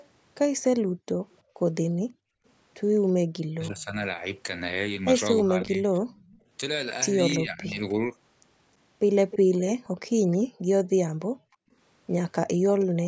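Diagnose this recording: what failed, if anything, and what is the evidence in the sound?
A far-end loudspeaker's echo canceller, in the call processing stage, likely failed to remove all of its microphone pickup, producing an echo leak. Delayed copies of the voice, roughly 0.31 to 0.33 s late, surface at 0.0–0.07, 3.8–3.85, 5.38–6.38, 7.9–10.37 and 12.8–12.85 s. They sit roughly 15 to 35 dB below the speech, and are strongest at 7.9–10.37 s.

The same canceller clamped the microphone while its loudspeaker was active, gating the background. The room sound drops by as much as about 40 dB between 0.82 and 2.45 s and again between 9.85 and 11.75 s. In each stretch the gaps add up to roughly 0.7 s, and the room sound returns once the canceller releases.

When both sides spoke at once, the canceller likely could not separate the local talker from the echo and pulled everything down, suppressing speech in double talk. 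Between 3.46 and 7.8 s the voice dips by as much as roughly 20 dB, for about 1.5 s in total.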